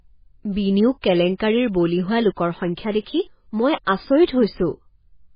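Throughout, the speech sounds watery and swirly, with nothing above 5 kHz, which is likely heavy MP3 compression at a very low bitrate, around 16 kbps.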